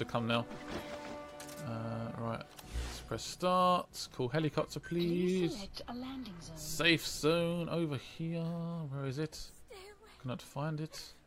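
Nothing in this one gives me anything to flag, with no dropouts, glitches or other technical trouble turning up anywhere along the way.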